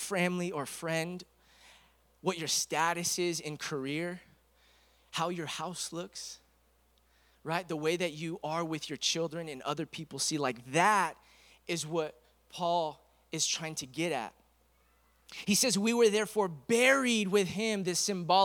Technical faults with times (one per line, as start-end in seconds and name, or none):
none